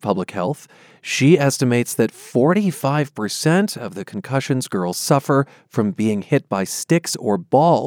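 No technical faults can be heard anywhere in the speech. Nothing at any point in the recording calls for comment.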